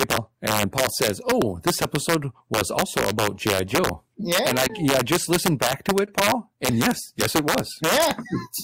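Integer overflow runs through the whole speech clip. The level is driven about 6 dB too hot, and the loudest peaks wrap to the opposite sign instead of limiting. Around one percent of the audio is affected, heard as sharp, violent cracks.

Short concealed packet loss hits at 4.67 to 4.71 s, just before "I just listened back", and again at 6.05 to 6.09 s, right after "just listened back to". Each time, audio arrived too late and was patched by extending the preceding sound. It comes across as a brief smear or wobble.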